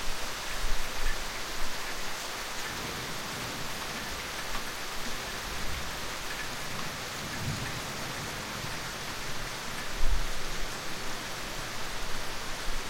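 No technical faults are audible.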